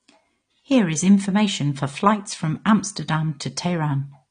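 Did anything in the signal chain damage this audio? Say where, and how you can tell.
Yes. Throughout, the speech sounds dull and smeared, with nothing above 9.7 kHz and a warbly, fizzy edge on held sounds and sibilants. The likely cause is AAC compression at the codec stage: coarse quantisation and a lowered cut-off, consistent with roughly 32 kbps.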